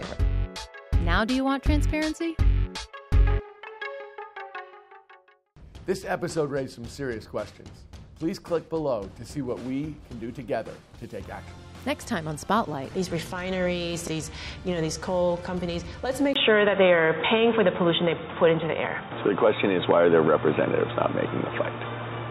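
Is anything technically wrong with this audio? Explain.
Yes. At 16.3 s the audio abruptly loses everything above about 3.8 kHz and stays that way to the end. The change comes with a 20 ms silence, a level shift of about 5 dB, and a new background noise sitting roughly 50 dB below the signal. This is likely the input switched to a poorer device, such as another microphone or a headset's call profile, whose narrower band, different gain and own noise floor replace the original source's.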